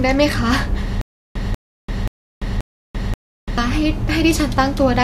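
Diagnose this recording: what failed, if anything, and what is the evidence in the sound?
Stutter with silent gaps, at the playback or stream buffer stage. From 1.01 s to 3.58 s the speech stalls. A 191 ms fragment repeats five times, each followed by 340 ms of digital silence, every 531 ms. A starved buffer likely replayed its last fragment at each retry. The missing audio is lost.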